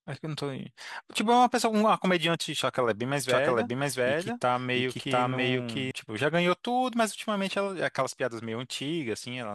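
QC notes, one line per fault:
3.29 to 5.91 s, doubled audio track: a second full-band copy of the speech runs about 0.7 s behind, at roughly the same level. It has no decay or room colour and cuts in and out abruptly. Likely a second capture path or a misaligned edit.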